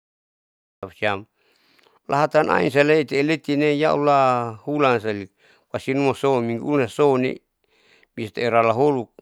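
Capture began late: a cut-off start leaves digital silence until 0.83 s, then the speech enters abruptly mid-sound, with no natural attack or fade.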